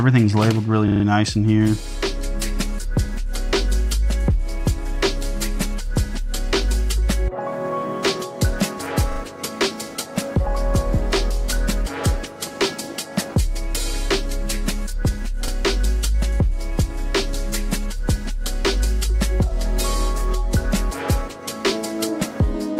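Repeated buffer at 0.88–1.04 s and 15.48 s: a 40 ms piece of the audio plays four extra times, then once extra, each with a hard stutter join.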